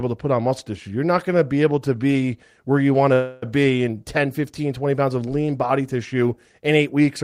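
From 3.13 to 3.44 s the speech stalls into a fading buzz, then resumes intact: a call audio freeze, likely from delayed packets draining the jitter buffer.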